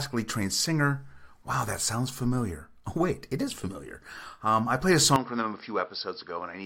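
At 4.93 s, just after "I played", a single loud pop jumps out, roughly 10 dB above the speech. It is likely a voltage pulse from a plug, switch or static.

From 5.16 s, after "I played a", the input switched to a poorer device, likely. Nothing passes above 5.4 kHz. The sound turns dull, drops about 5 dB and gains faint noise.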